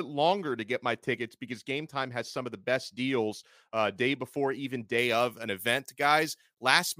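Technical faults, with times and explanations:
4.98 to 7.00 s, pre-emphasis left on: after "uh day before even", a treble lift matching a 75 µs FM curve is never undone by de-emphasis. The highs sit about 14 dB hot at 10 kHz against 1 kHz, so the speech turns thin, bright and harshly sibilant.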